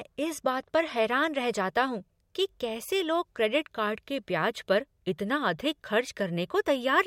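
Nothing in the recording stood out as a technical problem on listening.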